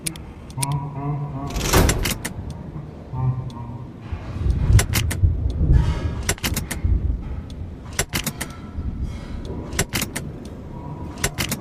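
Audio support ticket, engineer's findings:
No audible faults found.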